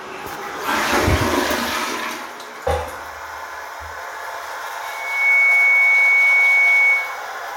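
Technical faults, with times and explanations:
4.82–7.28 s, loudspeaker feedback squeal: a 2.2 kHz tone swells within about half a second to roughly 10 dB above the sound, as the microphone re-amplifies its own loudspeaker; spectrogram shows one bright horizontal line.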